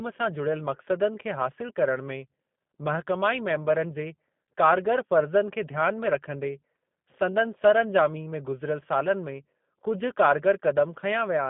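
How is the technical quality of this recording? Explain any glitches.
The quality is limited by G.729 codec damage throughout. Speech is narrowband, roughly 150 Hz to 3.6 kHz, with nothing above 3.7 kHz. Its rough, synthetic buzz comes from frame-by-frame resynthesis at a rate that fits 8 kbit/s, not from simple band-limiting, which would sound dull but clean.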